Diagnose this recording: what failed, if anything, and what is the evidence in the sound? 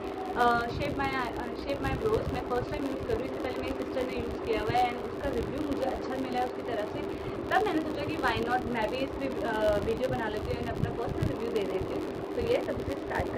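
A filter restarted on every block at the buffer stage. Throughout the recording a buzz at about 93.8 Hz rides on the sound, rising and falling with its level, which fits a 512-sample buffer. The filter drops its state at each block boundary, leaving a small transient there.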